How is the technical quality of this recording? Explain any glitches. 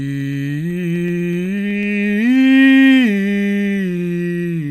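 The music has a glitch: periodic USB or driver dropouts from 0.08 to 1.83 s, repeating every 0.125 s, about fifteen times. A blocked bus skips a fraction of a millisecond each time, producing regular ticks that show as evenly spaced vertical broadband lines on a spectrogram and tiny waveform discontinuities.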